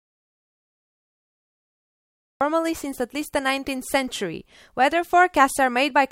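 Speech recording that opens in an audio dropout to silence: plain silence with no room tone until 2.41 s, likely from lost input such as a disconnected device or mute.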